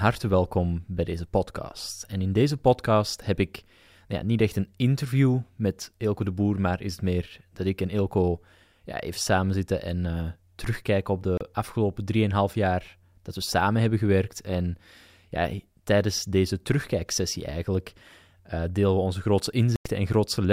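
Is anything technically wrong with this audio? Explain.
Yes. Two brief silent holes cut into the speech: one from 11.38 to 11.41 s, right after "terugkijken op", and a longer one from 19.76 to 19.86 s, right after "onze grootste". These are digital broadcast dropouts. The receiver muted when incoming frames were lost or failed their checks, then resumed once good frames arrived. The gaps of about 32 ms and 96 ms fit one and three 32 ms frames going missing, and whatever was said in them is gone.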